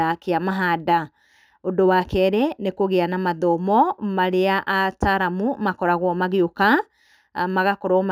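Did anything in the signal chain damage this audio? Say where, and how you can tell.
Yes, at the resampling stage there's imaging from linear upsampling throughout. The speech was stepped up from 16 kHz to 48 kHz by joining samples with straight lines, so the top end sounds dulled and a faint mirrored band sits between 8 and 16 kHz, roughly 40 dB down, putting a metallic shimmer on sibilants.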